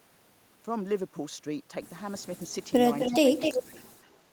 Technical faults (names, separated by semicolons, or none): echo leak; speech suppressed in double talk